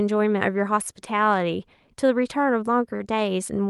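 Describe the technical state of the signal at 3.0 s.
At 3.0 s a late packet caused a short stall: the packet missed its slot, the jitter buffer ran dry, and the receiver stretched the last sound by about 39 ms. From 2.96 to 3.02 s the speech holds too long with a faint buzz or dip, losing nothing but arriving 39 ms later afterward.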